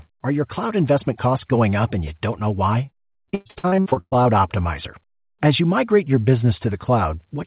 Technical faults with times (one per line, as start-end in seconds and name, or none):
2.86-4.27 repeated packet loss (robotic sound)